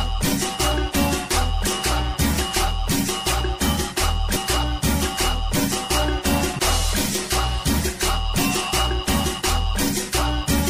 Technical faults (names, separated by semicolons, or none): MP3 compression; damaged data in a compressed stream